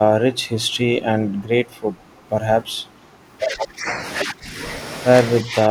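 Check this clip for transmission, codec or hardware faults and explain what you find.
Two faults turn up in this speech clip, both tied to echo cancellation.

From 1.38 to 1.44 s there is an echo leak: a very faint copy of the speech returns about 307 ms late, well below the talker. It most likely slipped past the far end's echo canceller. On a spectrogram it shows as a weak, smeared ghost of earlier harmonics.

From 5.42 s to the end, the speech is suppressed in double talk. The canceller, likely faced with both sides at once, turns the talker down by around 10 dB across roughly 150 ms. The waveform envelope sags.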